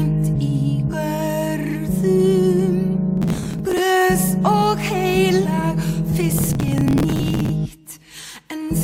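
At 0.90 s, compressed frames are skipped. The audio jumps ahead by about one 42.7 ms frame. From 3.17 to 3.80 s, processor overload crackle tears through the sound. Many short buffers, roughly 10 ms each, miss their deadline and are simply dropped. At 5.42 s, about two frames skip, losing roughly a tenth of a second. From 6.30 to 7.49 s, the gritty crackle returns.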